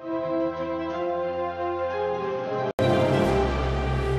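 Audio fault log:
0.00–2.79 s, input switched to a poorer device. The sound is dull and boxy, with nothing above 6.4 kHz. It sits a few decibels lower, by about 5 dB, over a background noise far beneath it. At 2.79 s an 80 ms gap falls, and the full, brighter band returns at a higher level. The likely cause is a change of capture device, from a narrow-band input to a better one.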